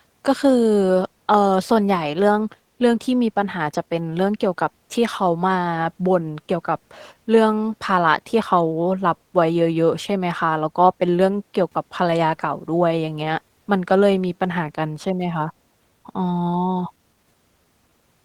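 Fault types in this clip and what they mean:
clock drift between sender and receiver: The sending end's audio clock is running a bit slow compared with the receiver's, something like 3 percent. The receiver keeps consuming samples faster than they arrive, so its jitter buffer keeps draining and has to be topped up by stretching the material. It's not one event but a steady mismatch across the whole speech clip, which is why the little timing wobbles never settle down.
repeated timing corrections: From about 0.22 s right through to 18.24 s, the receiver keeps patching in repeated short fragments to cover for that slow sender. Every correction goes the same way, lengthening rather than trimming, and they land at uneven intervals, so the speech comes across at roughly 97 percent speed. Altogether the repeats pad the clip out by somewhere around 0.7 s.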